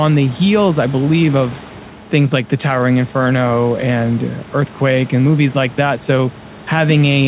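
Listening to this speech recording, nothing stood out as a technical problem.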